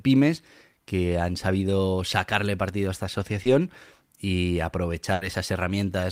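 Just after "sacarle partido a esta", from 3.43 to 3.47 s, the speech briefly smears, a wobble where the sound seems to stretch rather than move on. This is short concealed packet loss: about 20 ms of audio never arrived at the decoder in time, so the receiver patched the hole by extending the preceding sound, following its pitch where it was voiced, before blending back into the real signal.

From 5.13 to 5.23 s the speech stalls into a fading continuation of the last sound and then picks up further along, as though a small piece had been skipped. This is a burst of packet loss: roughly 80 ms of consecutive audio was lost or arrived too late to play. The receiver kept repeating the last sound while turning it down, then resumed with the real audio, so that stretch of speech is simply gone.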